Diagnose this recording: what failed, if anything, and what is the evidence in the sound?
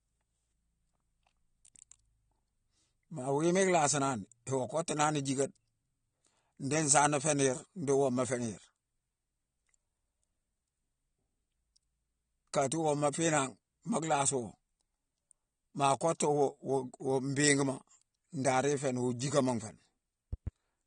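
The stage is the codec. The speech is band-limited throughout, with nothing above 9.7 kHz, and the coding damage is plainly audible. It is likely AAC-LC compression at a low bitrate, consistent with about 32 kbps. The encoder quantises its frequency lines coarsely and discards the top band to save bits.

Two loud pops occur between 20.33 and 20.50 s, just after "jickama nfé ni". They peak about 5 dB above the speech, which continues underneath. The likely cause is a sudden voltage step or pulse from a plug, switch, static or driver glitch. The stage is analogue wiring or driver.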